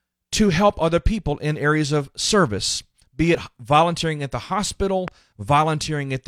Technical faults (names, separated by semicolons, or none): overlap between stream segments; loud pop